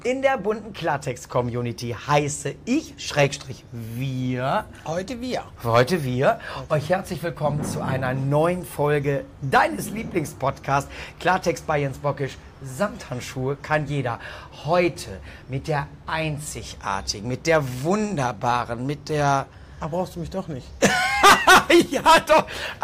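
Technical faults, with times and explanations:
No technical faults can be heard anywhere in the audio, and the signal holds steady in continuity throughout.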